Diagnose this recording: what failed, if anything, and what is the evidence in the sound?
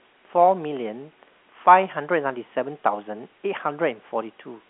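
Nothing in the chain has failed: the speech sits over a room noise about 37 dB below it and occupies the usual telephone band of 200 Hz to 3.4 kHz, with nothing above 3.8 kHz, which is what G.711 mu-law coding at 64 kbps delivers, and its quantisation noise is at most faint.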